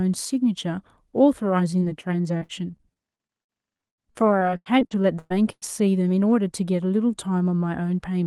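At 1.79 to 1.83 s there is a short concealed packet loss: about 20 ms of the speech never arrived in time, and the receiver bridged the hole by extending the preceding sound, following its pitch if voiced or substituting shaped noise if not, before cross-fading back into the real signal. Around 16 ms of that is synthetic fill, heard as a brief smear or wobble in the speech.

From 2.37 to 5.64 s the clip suffers repeated packet loss, giving a robotic sound. Nineteen separate gaps fall within this stretch, totalling about 900 ms of missing audio, the longest 113 ms. Because each hole is patched by continuing the last sound and the next loss arrives shortly after, roughly a quarter of the span is concealment rather than real signal. The speech turns choppy, with fragments dropped. The Opus call path's audio band reaches about 12 kHz.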